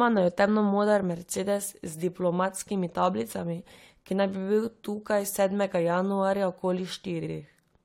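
A speech clip with repeated frames: from 7.23 to 7.30 s a 70 ms stretch plays twice, a quick stutter that adds 70 ms and fits about three compressed frames sent twice. Unlike a dropout, nothing is lost; identical sound simply recurs.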